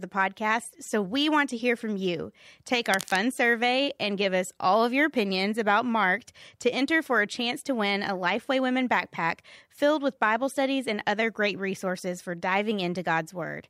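From 2.92 to 3.17 s, a burst of cable scratch noise cuts across the speech. It sounds like harsh, uneven scratching, roughly 10 dB below the voice. A worn cable or connector being moved is the likely cause. Its contact resistance flickered rapidly.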